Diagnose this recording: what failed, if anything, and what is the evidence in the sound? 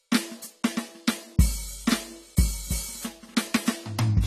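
Codec stage: the music sounds dull and coarse all the way through, empty above 14 kHz. That's likely AAC compression starved to around 32 kbps, dropping the top bands.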